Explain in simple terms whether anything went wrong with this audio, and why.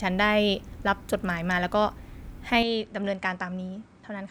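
From 2.63 s to the end, speech turns duller and slightly quieter, losing everything above 9.3 kHz: likely an input switched to a poorer device.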